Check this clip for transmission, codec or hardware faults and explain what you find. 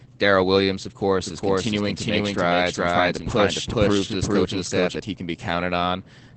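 Two faults are present: low-bitrate Opus voice compression across the whole clip, and a doubled audio track in the middle.

Opus voice compression runs throughout. Nothing reaches above 8.4 kHz, and the speech sounds muffled, slightly hoarse and faintly robotic, which fits SILK linear-prediction coding at around 12 kbps with a coarsely coded excitation. Unlike a plain low-pass filter, the damage goes beyond lost treble: the texture of the voice itself is degraded.

A doubled audio track runs from 1.24 s to 4.96 s. A second full-band copy trails the original by roughly 0.4 s at about equal level, and it starts and stops abruptly. It has no decaying tail or room colour, which sets it apart from acoustic echo or reverberation. The likely cause is a second, slower capture path or an edit holding two misaligned copies.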